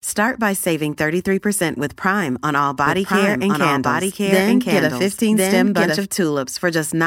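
Right after "on all", from 2.86 to 6.04 s, there's a doubled audio track: a second, equally loud copy trailing about a second behind, likely from a slower capture path.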